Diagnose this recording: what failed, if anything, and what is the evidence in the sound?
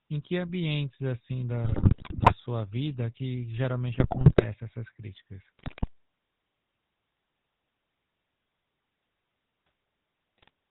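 Codec stage: the speech has a GSM full-rate codec's buzzy, gravelly roughness throughout, consistent with 13 kbps coding. A spectrogram shows everything above 4 kHz cut off.

Radio-link stage: GSM bit errors cause squawks, pops and gargling at 1.64–2.35 s after "que ambientes assim", 3.94–4.45 s after "vida que", 5.59–5.88 s after "essas críticas", and 10.38–10.50 s. Corrupted filter, pitch and gain values bend the spectrum and make level spikes, seen as distorted spectral bands and sudden waveform bursts.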